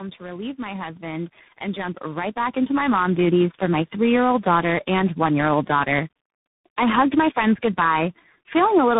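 From the first moment to the end, the speech sounds rough, muffled and warbly, with nothing above 3.8 kHz. This is tandem speech coding. The call crossed several links, each with its own speech codec, and was decoded and re-encoded at every border. Each coder worked on damage the previous one had already done. The texture fits about four speech codecs in a row, ending in a CVSD-style delta-modulation link, with the coarsest step likely a low-rate coder near 6 kbit/s.

Between 0.17 and 3.42 s, just before "for my three year", the speech and the background noise swell together, growing about 14 dB louder over roughly three seconds. This is automatic gain rising. The automatic gain control judged the input too quiet and raised its gain step by step, not all at once. Because it amplifies the whole signal, the noise floor climbs right along with the speech.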